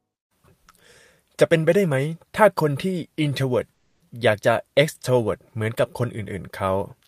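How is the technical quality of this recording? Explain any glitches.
One glitch stands out, a call audio freeze from 3.73 to 4.02 s. Packets were most likely held up in transit, so the receiver's jitter buffer ran dry and it had to fill about 270 ms with a continuation of the last sound. That stretch comes out as a smeared, fading buzz rather than silence. When the packets arrive, the speech resumes exactly where it stopped, with nothing skipped, but everything after it now runs about 270 ms late.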